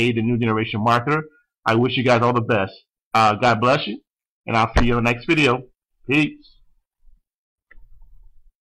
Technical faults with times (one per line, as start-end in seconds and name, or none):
none